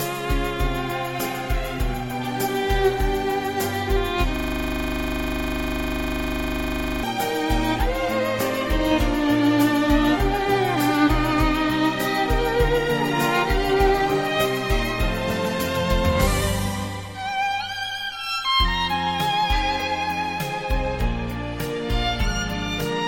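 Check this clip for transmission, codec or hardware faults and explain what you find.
There is one hardware-side fault. A system hang loop runs from 4.36 to 7.04 s: playback froze while the device kept replaying one 40 ms buffer, heard as a rough 25 Hz stuttering buzz.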